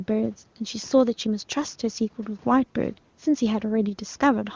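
Nothing goes wrong anywhere in this bit of speech; it's just an ordinary call path, with the microphone processing trimming away the lowest bass and the sound topping out around 8 kHz, and the AMR wideband (HD Voice) coding, at what points to its top rate, leaving little or nothing behind worth noticing.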